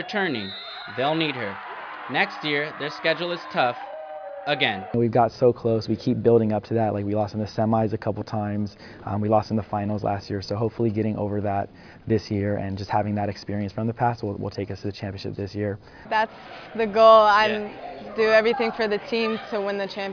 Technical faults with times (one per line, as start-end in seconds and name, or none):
none